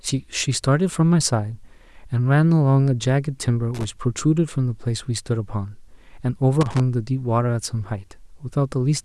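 An irregular burst of crackle and scratching cuts through the speech from 3.74 to 3.84 s, and again from 6.61 to 6.80 s. This is loose connector crackle: a worn or dirty contact briefly makes and breaks, chopping the signal into those rough fragments.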